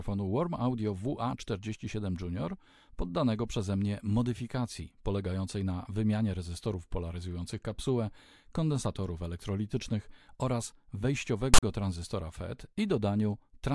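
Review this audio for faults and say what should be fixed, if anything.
A burst of static with hard edges cuts into the speech from 11.54 to 11.63 s, roughly 90 ms. This is file tags played as audio: a block of text metadata was decoded as if it were samples. The character bytes come out as a loud, rasping noise offset to one side of zero, and the zero padding within the block drops to dead silence. The fix is to trim the tag block from the audio. To prevent it, the decoder or editor should parse the container correctly and skip metadata chunks so that they never reach the sample stream.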